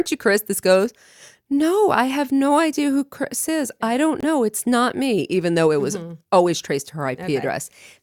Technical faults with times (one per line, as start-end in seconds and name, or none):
4.20-4.24 Bluetooth dropout